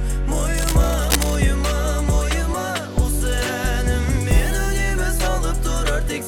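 From 0.58 to 1.37 s, dense rustling and scratching sits about 10 dB below the sound: cable scratch noise, likely a worn cable or connector being moved.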